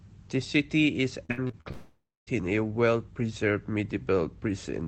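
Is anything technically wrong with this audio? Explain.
Yes. There are two faults, both just after "city is."

From 1.25 to 1.67 s there is repeated packet loss, giving a robotic sound. Five short holes, the longest about 63 ms, are patched by stretching earlier audio. The result is choppy, with pieces missing.

From 1.71 to 2.29 s, a long network dropout is the likely cause. The last sound is continued as a fading buzz or hiss, which ends in about 0.25 s of silence before the audio resumes, with that part lost.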